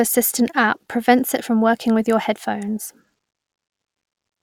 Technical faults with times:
none

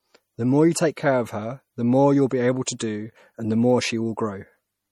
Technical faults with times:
0.00-4.92 MP3 compression
2.79 pre-echo

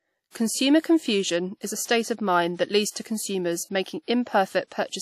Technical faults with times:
0.00-5.02 WMA compression
2.90-2.96 pre-echo

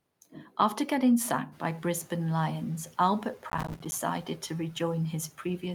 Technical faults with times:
1.51-2.15 noise suppressor catching up
3.50-3.93 processor overload crackle

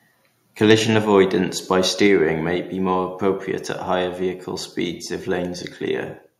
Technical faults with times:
0.70-0.74 microphone overload
1.05 microphone volume stepped down
2.07 microphone volume stepped down

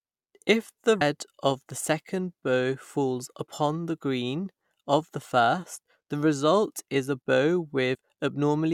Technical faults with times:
1.00 damaged data in a compressed stream
7.93 damaged data in a compressed stream

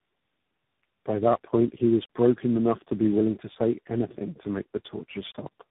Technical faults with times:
0.00-5.71 tandem speech coding

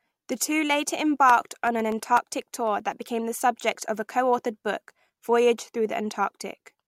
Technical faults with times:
1.17-2.92 periodic USB or driver dropouts

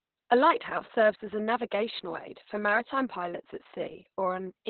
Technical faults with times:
0.00-4.70 Opus voice compression

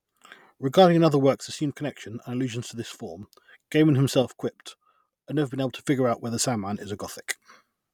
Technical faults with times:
1.35-3.23 one channel drops out
4.22-5.87 one channel drops out

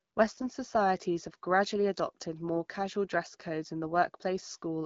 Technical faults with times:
0.33-0.46 AMR bit errors

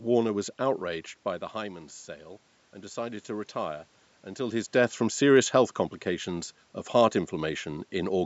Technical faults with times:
0.14-8.17 clock slip clicks

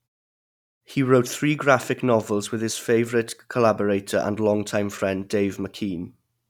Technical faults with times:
none

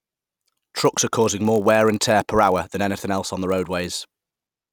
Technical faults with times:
0.00-4.73 block size mismatch (padded)

